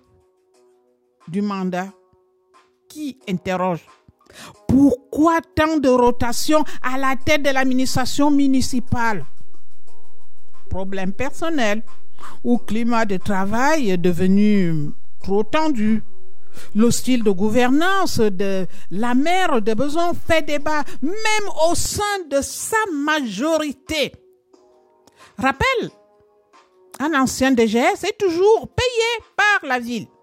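At 6.07 s there's a DC step: the waveform's zero line suddenly shifts by about -17 dBFS, so you get a low thump there. The offset holds until 21.86 s, then drops back with a second thump, while the sound itself carries on unchanged.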